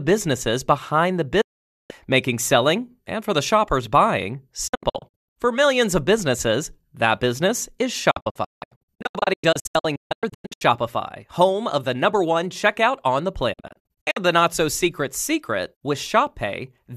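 Digital broadcast dropout occurs four times: a solid 0.48 s mute from 1.41 s, then bursts of short holes across 4.67–5.36 s, 8.11–10.62 s and 13.53–14.17 s. Failed frames, which fit a 24 ms frame length, make the receiver mute with 8 ms fades, and the missing programme never returns.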